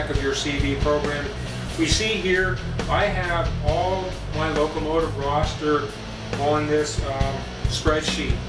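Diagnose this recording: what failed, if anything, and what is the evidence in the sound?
Nothing failed: no stage between capture and playback leaves any audible evidence of a fault anywhere in the recording.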